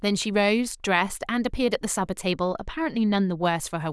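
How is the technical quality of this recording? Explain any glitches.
The recording has one glitch, a stretch of channel delay (comb filtering) between 2.31 and 3.45 s. During that span one channel runs late by roughly 0.04 ms, which points to about a one-sample offset. When the channels are summed to mono, the shared content cancels near 10 kHz. The speech loses its top-end air and sounds slightly dull. A spectrogram would show a dark band of missing energy around 10 kHz that starts and stops abruptly at those times, while the waveform itself looks nearly unchanged.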